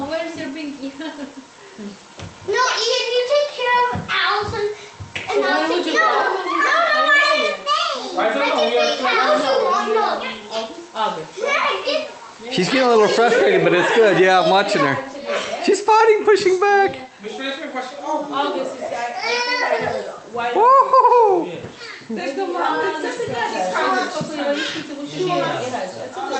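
No technical faults can be heard in this audio.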